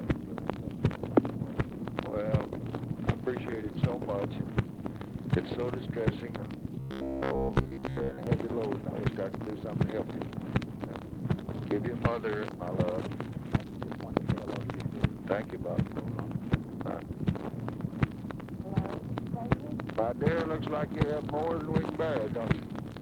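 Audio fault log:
6.80–8.27 s, robotic sound from repeated short buffers: the sound turns into a rigid metallic buzz at 66.8 Hz that only loosely follows the audio. The likely cause is a starved stream looping a buffer of about 15 ms, with roughly 70 percent of the span repeated while real audio is skipped.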